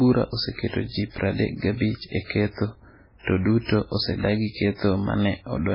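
Throughout the speech the sound is dull and watery, with nothing above about 5.3 kHz, and s sounds turn swirly and metallic while consonant attacks smear. This is likely heavy MP3 compression at a very low bitrate, which fits roughly 16 kbps.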